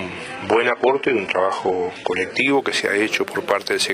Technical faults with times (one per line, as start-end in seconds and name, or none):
0.00-2.50 adaptive stream starting at a low bitrate